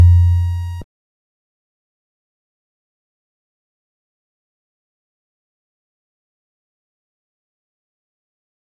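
No technical faults can be heard anywhere in the audio.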